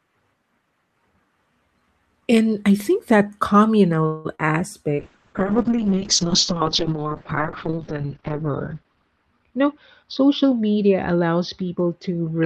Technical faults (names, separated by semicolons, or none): call audio freeze; short concealed packet loss; call bitrate drop; jitter buffer speed-up